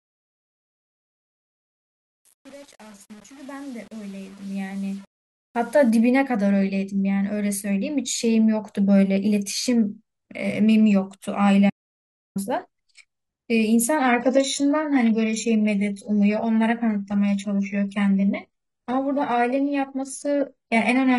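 Across the fade-in from 0.0 to 5.9 s there's truncation distortion: the quiet start is gritty, like an undithered stage keeping only about 7 bits. At 11.70 s the speech drops out to dead silence for 0.66 s, back at 12.36 s, likely a lost input with silence written. From 13.96 s to the end it's an adaptive stream at a lower bitrate: treble stops at 11.1 kHz, fitting a switch from 96 kbit/s AAC to 12 kbit/s HE-AAC.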